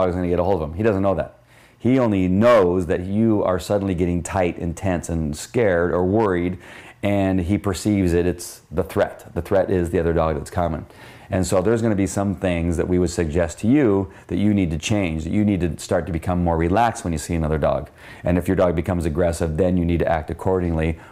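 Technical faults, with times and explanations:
0.00–14.78 s timecode bleed: a faint chirping warble, roughly 45 dB down, flipping between tones near 1 and 2 kHz. That flipping, unlike a steady whine, points to leaked 23.976 fps code.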